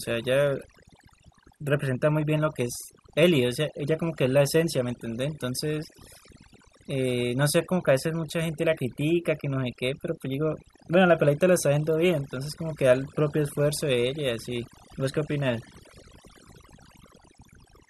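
Overdone noise removal runs throughout the speech: an overly strong noise reducer gates bands near its noise estimate, leaving twinkling near-silence between phrases and stripping quiet parts of the voice.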